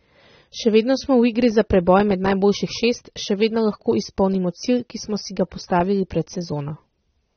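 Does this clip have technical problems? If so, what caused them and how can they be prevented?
Yes. AAC compression runs throughout: nothing above 6.3 kHz, with dull, smeared, fizzy speech, likely from AAC-LC at a low bitrate near 27 kbps. Encode at 96 kbps or more to prevent it.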